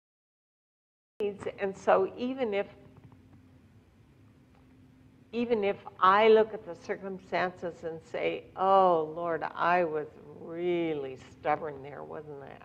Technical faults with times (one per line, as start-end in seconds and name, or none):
0.00-1.20 cut-off start